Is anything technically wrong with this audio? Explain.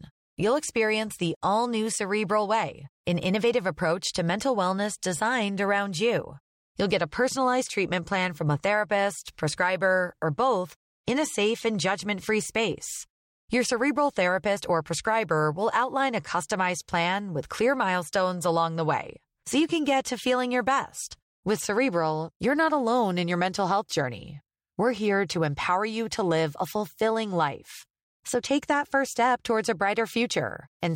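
No, nothing technically wrong can be heard in this speech recording. It runs from beginning to end without any audible technical fault.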